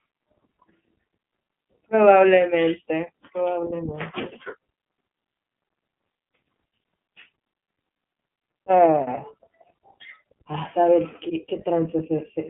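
From start to finish the speech sounds boxy and slightly rough, with a synthetic grain and no air or sibilant sparkle. The band runs only from about 150 Hz to 3.4 kHz. That is the iLBC codec at work: a narrowband VoIP coder that encodes each frame's excitation independently, and the texture here fits 30 ms frames at around 13.3 kbps, where the coding damage is plainly audible.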